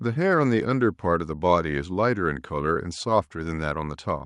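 No audible technical faults occur anywhere in this speech recording.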